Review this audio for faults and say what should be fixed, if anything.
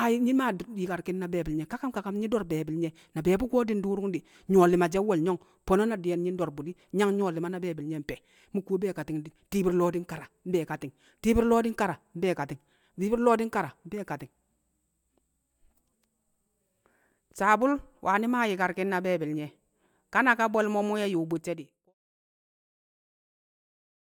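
Nothing here needs fixing: the speech carries on without trouble, and the gentle fade-out that begins at around 21.5 s and finishes at 21.95 s is a smooth, deliberate-sounding ending with no click or hard edge.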